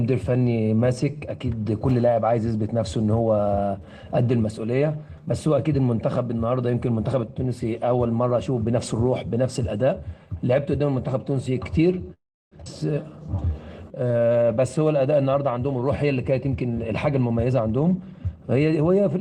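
At 12.13 s the audio hangs: the last sound gets stretched out and decays, and the final third of a second or so before 12.54 s is dead silent. That's a call audio freeze, with the jitter buffer likely running dry while packets were held up. When they arrive, playback resumes where it stopped, so about 0.38 s of gap is inserted and nothing is lost. Right after that, at 12.66 to 12.68 s, there's a skip ahead. Playback jumps forward almost seamlessly, but roughly a third of a second of audio is gone, with the two sides butted straight together. From 13.12 to 15.03 s you get a jitter buffer slow-down. Pitch periods are repeated over and over, so the audio runs at about 91% speed without the pitch dropping, and about 184 ms gets padded in as the buffer rebuilds its reserve. Then from 15.12 to 18.20 s it flips to a jitter buffer speed-up. Short pitch-period chunks are cut out repeatedly, so the audio plays at about 108% speed and sounds a bit hurried as the buffer trims roughly 0.3 s of excess delay.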